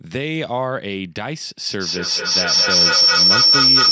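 From 1.64 s, a feedback howl: a microphone-loudspeaker loop gains level each pass, with repeats about 200 ms apart, swelling into a tone near 5 kHz that reaches about 11 dB above the speech.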